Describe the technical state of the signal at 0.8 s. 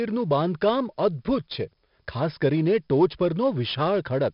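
At 0.8 s the speech carries 4-bit ADPCM compression, and it runs through the whole clip rather than just this moment. Each sample is coded as a small 4-bit step off a predicted value, so the error tracks the loudness. You get a gritty hiss riding on the louder syllables and some roughness on sharp onsets. The damage is heavy here, and with nothing above about 5.3 kHz it sounds dull too, which fits a low sample rate around 11 kHz.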